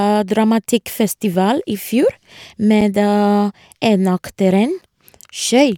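At 0.80 s the speech drops out for about 6.5 ms, and the same short hole comes back at 2.81 s and 4.81 s, about 2.0 s apart each time. That's a gap between chunks: the audio was handled in 2-second pieces, and a sliver of silence got inserted at each join. Nothing's missing, everything just resumes a touch late. You hear it as a tiny hole or dip, repeating at that steady 2-second spacing.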